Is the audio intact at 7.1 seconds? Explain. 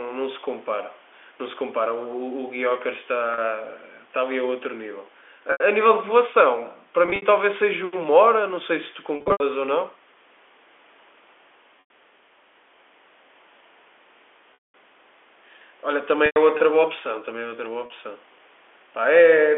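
No. Packet loss with pitch repetition hits 7.06 to 7.22 s: about 100 ms is missing across 160 ms, the longest gap 60 ms. The receiver loops the last pitch period, giving a held, buzzy tone, seen as flat repeated waveform cycles and frozen spectrogram harmonics.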